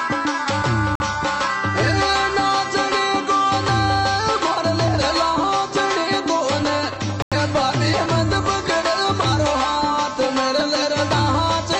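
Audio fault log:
0.95 to 1.01 s and 7.22 to 7.34 s: corrupt frame muted. Damaged compressed frames were rejected by the decoder and replaced with silence, giving abrupt holes of about 56 ms and 112 ms, consistent with two and four frame lengths. Unlike concealment, nothing is smeared or repeated. Unlike a buffer drop, the timing stays intact.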